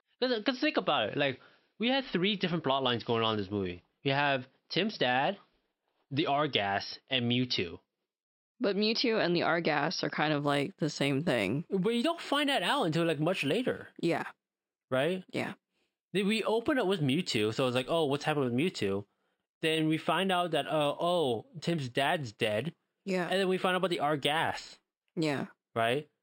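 Speech, and from 10.41 s, just after "are kind", to the end it shows imaging from linear upsampling: audio at 12 kHz was raised to 48 kHz by straight-line interpolation. That dulls the top and leaves a mirror image across 6 to 12 kHz, roughly 25 dB down, heard as faint metallic shimmer on sibilants.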